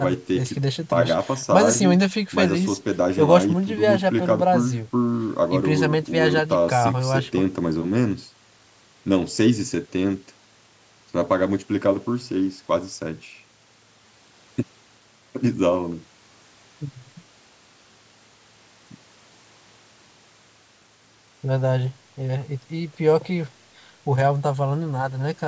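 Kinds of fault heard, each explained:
No technical faults can be heard in this speech. It has gone through a call's microphone processing, so the lowest bass is trimmed and nothing reaches above 8 kHz, which is normal for that path.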